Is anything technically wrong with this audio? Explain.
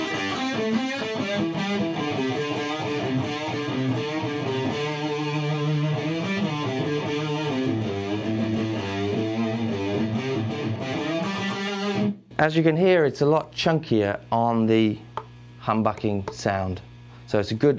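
No, nothing technically wrong can be heard here.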